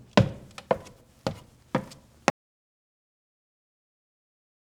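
An audio dropout to silence begins at 2.3 s and runs to the end of the clip, about 2.4 s of silence with no room tone. The input was most likely lost through a disconnected device, failed link or mute while recording continued, so the sound simply stops.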